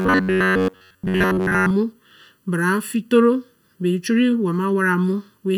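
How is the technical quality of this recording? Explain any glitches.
The recording has two clear technical faults: a hollow coloration throughout, and a mechanical buzz at the start.

From 0.01 to 1.72 s there is robotic sound from repeated short buffers. The speech becomes a rigid, metallic drone pitched near 93.8 Hz, which fits a buffer of about 10.7 ms being replayed over most of that stretch. The likely cause is audio arriving too seldom. Unlike ordinary dropouts, there is no silence, only the repeated buzz.

Across the whole clip there is channel delay (comb filtering): one channel lags the other by roughly 0.7 ms. When they are summed, fixed notches fall at evenly spaced frequencies starting around 700 Hz, making the speech sound hollow and phasey. Unlike a moving flanger sweep, these notches never shift.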